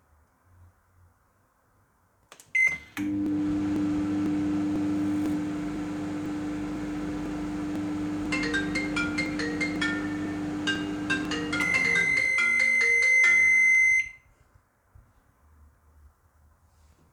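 From 0.27 s to 16.75 s, periodic USB or driver dropouts tick every 0.5 s, about thirty in all. Each time, roughly a millisecond of audio is skipped. Unlike random digital clicks, these are strictly evenly spaced and sound only while signal is present.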